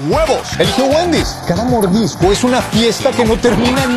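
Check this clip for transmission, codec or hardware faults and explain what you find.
One fault is present. From 1.22 to 2.22 s, channel delay (comb filtering): one channel lags by about 0.2 ms before mono summing, cancelling evenly spaced frequencies from around 3 kHz upward, giving a hollow, phasey sound.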